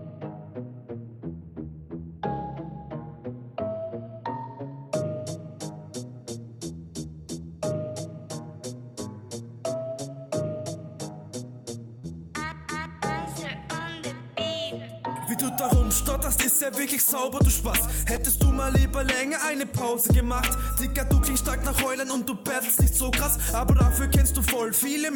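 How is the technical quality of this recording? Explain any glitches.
Three short concealed packet losses, at 1.37–1.43 s, 11.99–12.05 s and 18.15–18.19 s: 40, 40 and 20 ms arrived late, were synthesised by extending the preceding sound, and are heard as brief smears.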